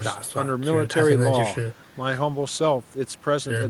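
No technical faults are audible.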